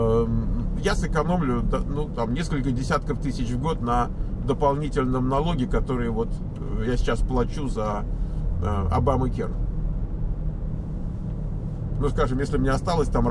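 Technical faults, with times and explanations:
No technical faults can be heard anywhere in the signal.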